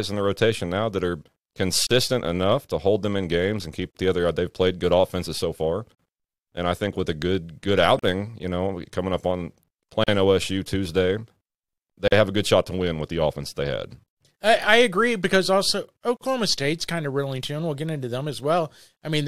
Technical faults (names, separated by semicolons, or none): gap at a join of encoded pieces